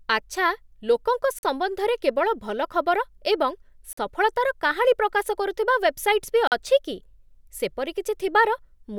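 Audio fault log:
1.39–1.43 s, 3.93–3.97 s, 6.47–6.52 s: gap between chunks. The speech runs in 2.5 s chunks, and at each join there's a 44 ms hole of dead silence with hard edges on both sides. Nothing is missing from the speech itself. It's just paused at the join and picks up where it left off, which is why it sounds like a regular stutter rather than clipped-off syllables.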